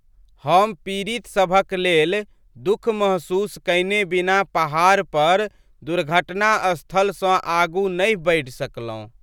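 Listening to this recording of speech, nothing stood out as a technical problem at any point.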